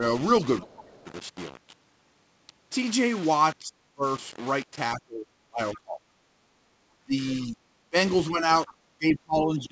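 Throughout, quiet passages turn grainy and gritty, the distortion moving with the speech, which points to rounding down to about 5 bits without dither, leaving error around 20 dB below the signal. From 0.6 to 1.09 s the talker dips sharply, by up to about 20 dB, likely double-talk suppression, with an echo canceller ducking speech while the far side talked. At 0.99 to 1.03 s a faint scrap of another voice leaks through, far below the talker, likely residual far-end echo the canceller missed. What are likely the same double-talk dips return from 3.61 to 4.05 s and 4.94 to 6.28 s, reaching about 30 dB, then from 7.04 s to the end at up to about 25 dB. At 8.66 to 8.74 s the other side's voice leaks through again, louder this time, roughly 25 dB under the speech. Across the clip nothing sounds above 8 kHz, which fits the G.722 call path at 64 kbps.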